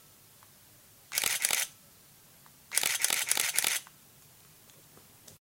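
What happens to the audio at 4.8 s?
Nothing goes wrong at 4.8 s; the sound carries on intact through that moment, with no dropout, click or distortion.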